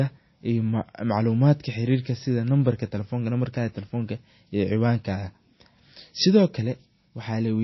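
From start to finish the speech sounds watery and swirly, with sibilants turned to metallic chirps, and nothing above 5.8 kHz. On a spectrogram the energy ends at a flat ceiling, with speckled gaps below. Likely cause: MP3 compression at a low bitrate, around 24 kbps.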